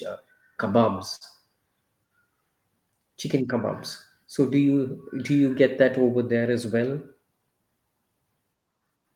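At about 1.15 s the speech briefly hangs: the sound in progress is drawn out for a moment, with a faint buzzy, slightly sagging quality, before picking up again at 1.24 s exactly where it left off, nothing skipped. This is a short stall from a late packet. The jitter buffer ran dry when a packet failed to arrive on time, so the receiver stretched the last audio by about 56 ms to cover the gap, delaying everything after it by that amount.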